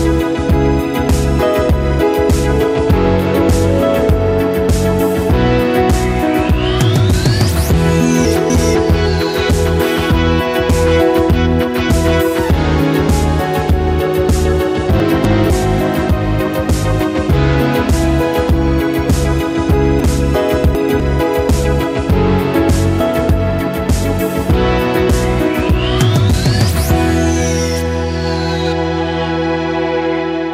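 Chunks out of order at 8.25–8.75 s, 15.0–15.5 s and 20.0–21.0 s: 250 ms blocks play one, one, then three places late, giving a jumbled moment. Unlike a dropout or repeat, nothing is missing or doubled.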